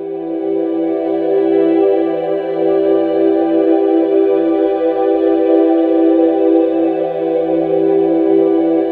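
No technical faults can be heard anywhere in the recording.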